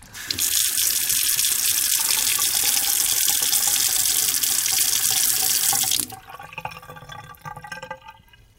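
Harsh crackle and fuzz break out on the loudest moments from start to finish. This is hard clipping: the level was driven about 16 dB past what the chain could pass, so roughly 0.4% of samples were sheared flat, adding high, gritty harmonics.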